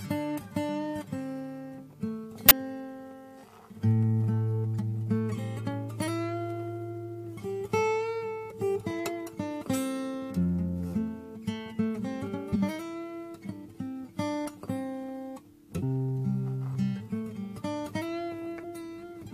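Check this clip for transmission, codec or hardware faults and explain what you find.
The clip has compressed frames skipped, at 2.49 to 2.53 s, 12.52 to 12.56 s and 15.82 s. Whole blocks of encoded audio never reached the output, either missing from the stream or discarded by the decoder as damaged, so playback jumps forward. Roughly a tenth of a second vanishes at the first and third points and about 50 ms at the second.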